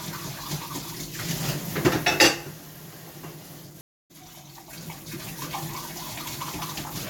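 At 3.81 s the sound cuts to silence for about 290 ms, a stream reconnect: the connection dropped and a fresh decoder restarted mid-stream. Unlike a simple dropout, playback resumes at 4.11 s from a point roughly 150 ms further on, so material is skipped.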